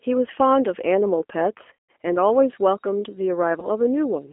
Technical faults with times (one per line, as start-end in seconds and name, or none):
0.00-4.33 G.729 codec
1.73-1.89 VoIP packet loss concealed by the speech codec
3.60-3.68 VoIP packet loss concealed by the speech codec